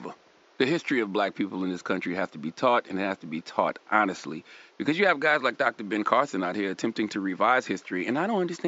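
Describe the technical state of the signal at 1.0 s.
At 1.0 s the signal is intact, with only the room's own background noise sitting about 34 dB below the speech.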